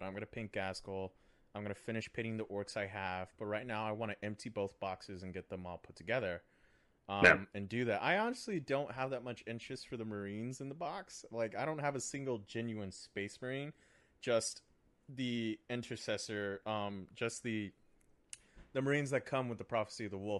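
Bluetooth LC3 compression runs through the whole of this speech clip, and the damage is plainly audible: the upper part of the spectrum sounds thinned and grainy, with a breathy, noise-like edge on the voice. The cause is likely the LC3 codec of Bluetooth LE Audio, which discards detail in the high band and substitutes shaped noise. The character fits coding at around 48 kbps with 10 ms transform frames.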